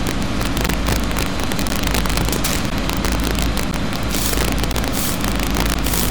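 From the start, loud moments break into violent cracks. This is integer overflow. The signal is driven about 7 dB past full scale. A small fraction of samples exceed the largest integer and wrap to the opposite sign. The result is far harsher than clipping.

Short holes with hard edges cut the sound at 0.68, 1.69, 2.70, 3.71, 4.73 and 5.74 s. Each is a gap between chunks, 13 ms of silence. The joins recur every 1.0 s. Nothing is lost. The flow just stops briefly at each boundary.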